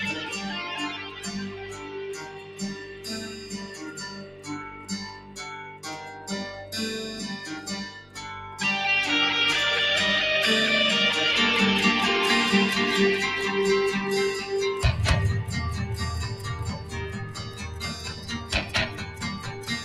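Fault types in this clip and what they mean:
noise suppressor applied to music or sounds: A noise suppressor built for speech stays active across the whole clip and treats steady tones, ambience and reverberant decay as noise. Its gain keeps shifting, with the level swinging by around 15 dB, so the sound pumps and thins while onsets pass largely intact. Unlike an ordinary compressor or gate, it reacts to how steady the sound is rather than how loud it is, so sustained material sinks even when it is loud.
sound cut by the noise suppressor: In specific stretches the suppressor pulls the sound down further than elsewhere, by up to about 10 dB. These start at 0.98, 1.48 (a three-second span to 4.48), 4.73, 5.12, 5.64 and 7.96 s, and the last runs from 16.78 s to the end. Held or fading parts sink or have their tails cut short while sharp attacks survive. A dropout or mute is different, because there everything vanishes together.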